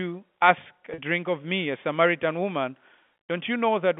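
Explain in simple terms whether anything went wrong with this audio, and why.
Just under a second in, from about 0.94 to 0.98 s, the speech briefly sticks on a slightly held, buzzy sound before carrying on. That is packet loss with pitch repetition. About 40 ms of audio never arrived, which fits two lost packets. To cover the hole, the receiver replayed the last short repeating cycle of the speech and faded it out. Because the gap was short, it comes across as a brief hum. The speech itself has the narrow, phone-line quality of G.711 telephone coding, which carries nothing above about 3.5 kHz.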